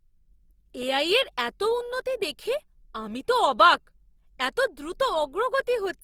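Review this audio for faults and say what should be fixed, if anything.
Throughout the speech, the tone has a rough, grainy texture, with a noisy fizz riding on the voiced sounds. The top end still reaches about 20.2 kHz, so the roughness doesn't come from lost bandwidth. The likely cause is Opus compression in its music-oriented CELT mode at a rate that fits roughly 24 kbps. The encoder keeps each band's energy but fills some bands with folded or noise content, so the damage is plainly audible. To prevent it, encode speech with Opus at a higher bitrate, or keep the uncompressed source.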